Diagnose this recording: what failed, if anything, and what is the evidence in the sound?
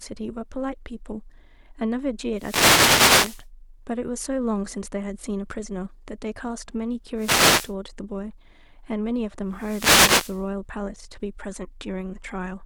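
The wireless link failed: three wireless microphone noise hits, at 2.33–3.48 s, 7.16–7.75 s and 9.49–10.49 s, heard as bursts of static over the speech. The analogue FM signal faded as reflections cancelled, letting receiver hiss surge. Spectrograms show broadband vertical noise bands; waveforms show fuzzy thickened patches.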